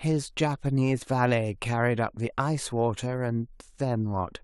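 Nothing in this short speech recording stood out as a technical problem on listening.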